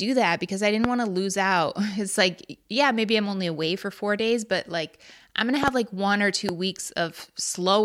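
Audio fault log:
0.84–0.87 s, loud pop: a single sharp pop standing about 20 dB above the speech, which carries on underneath. The likely cause is a brief voltage step, such as a plug, switch or static discharge, shaped by the downstream circuitry.
5.63–5.70 s, loud pop: two pops in quick succession, again about 20 dB up, likely from a repeated electrical transient.
6.49–6.51 s, loud pop: one shorter pop about 15 dB above the signal, likely from the same kind of voltage pulse.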